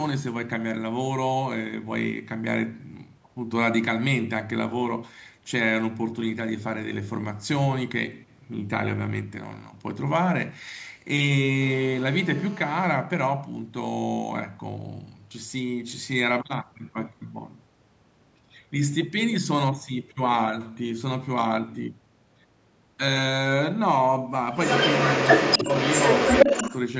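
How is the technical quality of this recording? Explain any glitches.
Two faults stand out in this speech recording, which is band-limited to 8 kHz by ordinary call microphone processing.

From 11.62 to 12.86 s a hard, raspy buzz cuts in, rich in harmonics and unrelated to the speech, at about 19 dB below it. This is GSM phone buzz: a nearby 2G phone in a call pulsing at 217 Hz, its radio bursts rectified by the audio circuitry.

From 24.56 to 26.76 s a copy of the voice trails the speech by 281 ms, about 5 dB louder than the speech itself. This is likely an echo leak, where a loudspeaker on one side of the call fed the call back into its microphone and the echo canceller failed to remove it.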